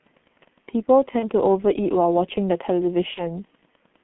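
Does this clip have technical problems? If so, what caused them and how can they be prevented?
Yes. The whole clip carries G.723.1 codec damage, and it is heavy. Audio is confined to roughly 150 Hz to 3.4 kHz, so it sounds muffled. The codec's slowly updated voice model and coarse 30 ms frames leave the speech hoarse, with smeared consonants. The roughness fits the codec's 6.3 kbit/s mode. To prevent it, negotiate a wideband codec such as G.722 or Opus instead of G.723.1.

VoIP packet loss concealed by the speech codec occurs twice: from 1.19 to 1.29 s, and from 3.14 to 3.23 s. In each case the gap fits a single lost 30 ms frame. The decoder filled it by extending its last pitch and filter at falling gain, which gives a brief buzzy or noisy, fading stretch. Because each frame depends on the previous one, the sound stays weakened or distorted for several tens of milliseconds after packets resume. 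Adding forward error correction or redundancy, an adequate jitter buffer, and QoS prioritisation on the network path would prevent these dropouts.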